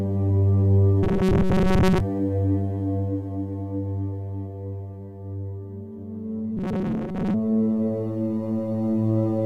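From 1.03 to 2.00 s and again from 6.57 to 7.35 s, the music takes on robotic sound from repeated short buffers: a rigid metallic buzz locked at 188 Hz, likely from a roughly 5 ms fragment looping while most of the real audio is skipped, unlike a stutter's audible gaps.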